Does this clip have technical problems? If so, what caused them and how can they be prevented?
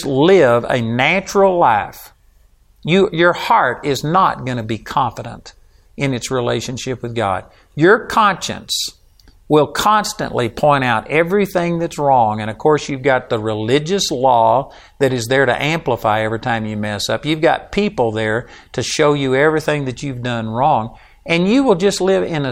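No, this clip has no technical problems. With nothing going wrong, there is nothing to trace or prevent.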